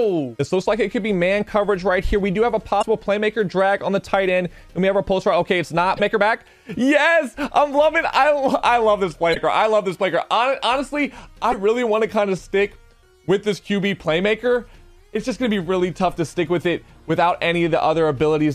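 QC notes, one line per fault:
2.78–2.84, 5.94–6.00, 9.31–9.37 and 11.48–11.54 s, damaged data in a compressed stream: four short glitches of about 55–60 ms each, where corrupted frames are misdecoded until sync is regained. A spectrogram shows a brief disruption at each point; the waveform shows abrupt discontinuities.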